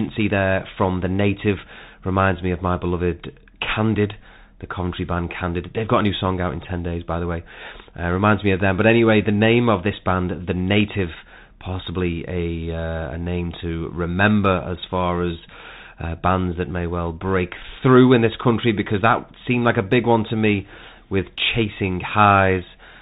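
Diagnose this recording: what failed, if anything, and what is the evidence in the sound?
The Bluetooth CVSD headset codec limits this speech throughout, at the codec stage. A spectrogram shows nothing above 4 kHz and a granular noise floor beneath the speech. S sounds are scratchy and loud high passages distort where the adaptive one-bit step, which fits a 64 kbps stream, cannot keep up.

A Bluetooth headset packet repeated at the radio link at 1.59 s. A gap of about 3.8 ms, consistent with one lost packet, was filled by decoding the previous bits again. It is heard as a small tick and appears on the waveform as a short duplicated segment with a seam.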